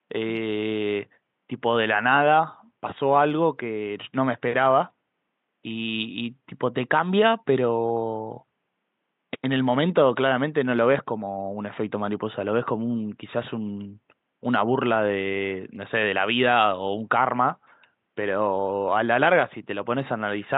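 There are no technical faults to describe in this clip, only faint room noise sitting about 55 dB below the speech.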